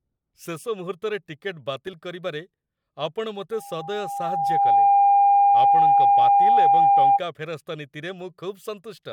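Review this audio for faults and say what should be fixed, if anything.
A microphone picked up its own loudspeaker, pushing loop gain past one at 802 Hz: loudspeaker feedback squeal from 3.52 to 7.21 s, swelling over about a second and a half to roughly 15 dB above the speech. To prevent it, lower the gain, move the microphone away from or behind the loudspeaker, or notch out 802 Hz.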